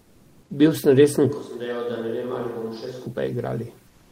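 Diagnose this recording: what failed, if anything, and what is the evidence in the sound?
Comfort noise in place of the background, from 0.0 to 0.49 s and again from 3.87 to 4.12 s, points to the codec stage, likely discontinuous transmission. The pauses hold a steady, featureless hiss about 39 dB below the loud parts, within about 1 dB of the surrounding level. Genuine room noise would keep its texture instead.

A switch to a distant microphone hits the capture stage from 1.30 to 3.06 s, just after "sem resen". The sound turns roomy and hollow and drops roughly 10 dB, with room noise around 40 dB under it, most likely from falling back to a further microphone. Unlike comfort noise, it colours the speech itself, and both transitions are abrupt.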